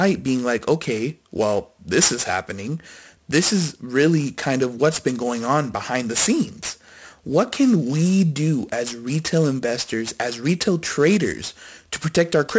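Aliasing runs through the whole speech clip. The rate appears to have dropped from 44.1 kHz to 16 kHz with no filter first. Content above 8 kHz folds back down, roughly 15 dB under the speech. Sibilants sound gritty and metallic, and the spectrum packs hard against 8 kHz.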